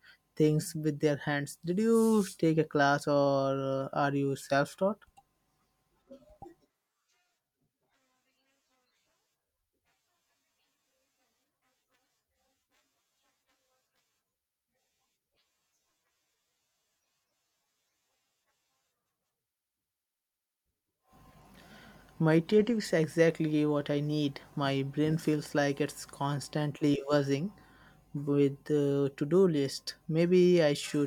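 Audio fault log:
3.3–4.8 s, resampler restarted on every block: just after "you take a class", regular ticks at 10 Hz, one every 100 ms, sit on the speech. Each block was converted without its neighbours' samples, which fits a 48 kHz to 44.1 kHz conversion, leaving a small error at every block edge.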